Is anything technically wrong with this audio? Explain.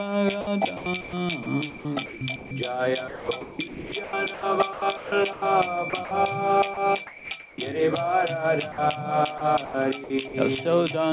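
Yes. From 0.41 to 2.51 s, 3.08 to 6.11 s, 6.74 to 7.58 s and 9.38 to 10.34 s the sound is chopped, likely by the sender's voice detector gating transmission on and off. About 750 ms, 1230 ms, 450 ms and 240 ms respectively become comfort noise, so the sound breaks up with holes.

At 8.72 to 8.78 s there is sound dropped by the voice detector, likely because it misread a quiet passage as background. About 50 ms of sound gives way to 60 ms of steady comfort noise before the signal resumes. Nothing is heard above 4 kHz, which fits a narrowband G.711 call path.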